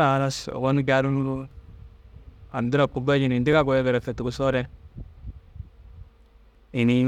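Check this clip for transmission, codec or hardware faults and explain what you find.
One fault is present: overlapping chunks, heard as brief stutters at 0.51, 1.51, 2.52, 3.53, 4.54 and 6.55 s. The audio was handled in 1.0 s chunks, and each new chunk began about 7 ms before the previous one finished, so a 7 ms slice of speech plays twice at every join. That doubled fragment produces a click-stutter. Unlike a dropout, nothing is missing. The glitch is a repeat, and its regular spacing rules out random packet loss.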